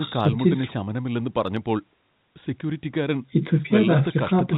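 No technical faults are audible.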